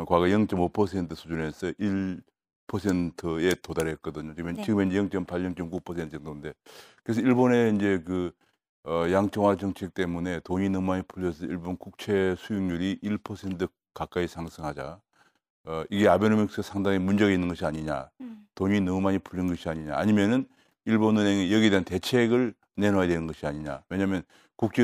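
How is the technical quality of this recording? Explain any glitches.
The technical quality of this recording is sound, with no glitches to explain.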